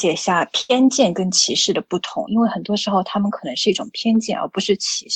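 At 0.61 s a burst of packet loss breaks the audio until 0.71 s. Several packets in a row failed to arrive in time, and the receiver filled about 78 ms by stretching the last sound it had and letting it fade. That stretch is heard as a held buzz or dying hiss, not silence, which sets it apart from a plain dropout. Playback then picks up about 80 ms further on, with that stretch of sound gone.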